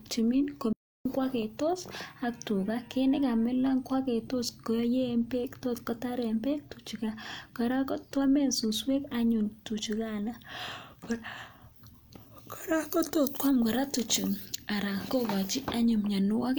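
An audio dropout to silence hits this speech recording from 0.73 to 1.05 s: about 0.32 s falls to silence with no room tone, likely from the input briefly disconnecting or muting, before the sound resumes on "kwagetos ak tuga ko". Pre-emphasis left on affects 12.55 to 14.55 s. The treble boost of a CD-style 50/15 µs curve was never undone, leaving about 8 dB extra at 10 kHz relative to 1 kHz, so that stretch sounds thin, bright and sibilant.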